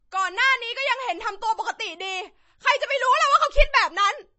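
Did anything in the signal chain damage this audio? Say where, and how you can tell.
Yes: MP3 compression throughout, likely at the codec stage. The speech is cut sharply above 7.9 kHz and has a watery, swirly texture, which fits a low bitrate around 32 kbps.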